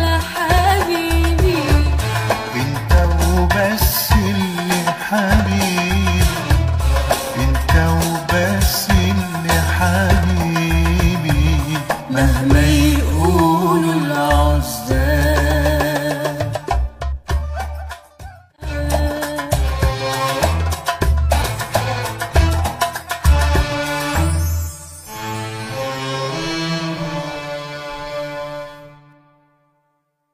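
At 21.37 s, running to 21.42 s, there is damaged data in a compressed stream. For roughly 60 ms the decoder is fed corrupt bytes where a valid frame should be. It cannot parse what it receives, drops out of sync with the frame structure, and has to hunt for the next good frame header before normal decoding resumes. The result is a brief, unnatural chirp, squawk, click or short hole cutting across the audio at that point.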